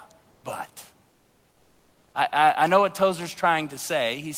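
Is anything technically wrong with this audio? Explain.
Yes. From 1.09 to 2.13 s, just before "I I know what", the sender likely stopped transmitting during the pause (discontinuous transmission, as in Opus DTX), so the receiver generated comfort noise in place of the background. For about 1.04 s the room noise, otherwise about 40 dB below the speech, becomes a steady, featureless hiss about 2 dB quieter.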